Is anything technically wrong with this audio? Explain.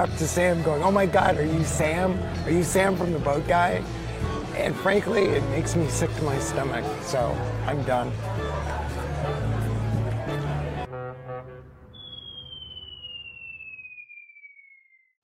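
No, the signal shows no technical faults at any point in the clip.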